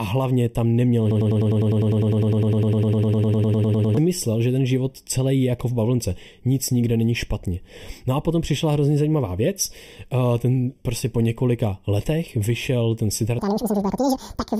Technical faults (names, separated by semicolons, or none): channel delay (comb filtering); broken-record loop; section at the wrong speed